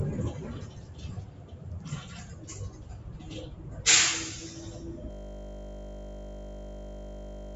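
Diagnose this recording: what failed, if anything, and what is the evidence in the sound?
At 5.11 s the audio locks into a system hang loop that runs to the end: a driver or buffer stall replayed one 20 ms block about 122 times, giving a steady 50 Hz buzz. The waveform shows identical 20 ms cycles, and the spectrogram shows flat harmonic lines at 50 Hz multiples, capped at 8 kHz by the call processing.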